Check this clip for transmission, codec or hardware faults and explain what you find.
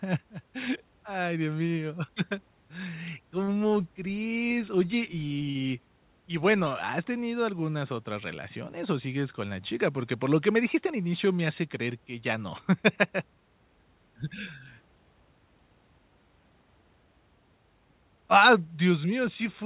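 Two transmission faults are audible, both from the receiver's jitter buffer. The sound stays band-limited throughout, with nothing above 4 kHz, as expected of a narrowband call codec at a rate that fits 64 kbps G.711 mu-law.

Short stall from a late packet, 5.50 to 5.57 s: the sound at this point hangs on for a moment too long, with a slight buzz or dip before it moves on. A packet did not arrive in time, the jitter buffer ran dry, and the receiver filled the gap by stretching the last audio for 50 ms. When the packet turned up, playback resumed exactly where it had stopped, so nothing is lost. The cost is 50 ms of added delay from this point.

Jitter buffer speed-up, 10.51 to 11.14 s: the speech here sounds hurried, running at about 106% speed while its pitch stays unchanged. The buffer was holding more audio than its target, and to bring the delay back down the receiver cut out short stretches of one or a few pitch periods, one after another. 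Together these came to roughly 40 ms of removed audio, which compresses this passage in time.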